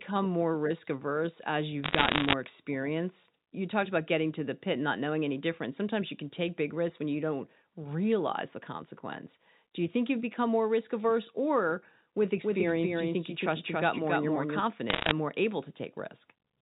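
Between 1.84 and 2.33 s, and again from 14.90 to 15.12 s, bits flip on the digital phone line. Around one and a half to two percent of bits are wrong, and each error corrupts a single sample. The result is a burst of sharp ticks and crackle laid over the speech, which itself passes through the G.711 telephone coding intact and band-limited below 4 kHz.

From 12.44 to 14.60 s there is a doubled audio track. A second copy of the same audio, likely from a slower capture path, is mixed in about 5 dB quieter and roughly 300 ms late. It is a dry, full-band echo with no room tail, and it starts and stops abruptly.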